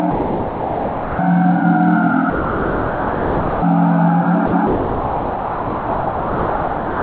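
The sound gives way to flat, steady noise from 0.11 to 1.19 s, from 2.3 to 3.62 s, briefly from 4.46 to 4.52 s, and from 4.67 s to the end, returning after each of the first three. This is likely sound dropped by the voice detector: the sender judged the audio to be background, stopped transmitting, and the receiver filled the gaps with comfort noise. Throughout, the audio carries nothing above 4 kHz, which fits a narrowband G.711-type call codec.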